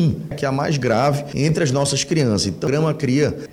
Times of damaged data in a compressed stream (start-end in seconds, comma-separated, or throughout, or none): 2.67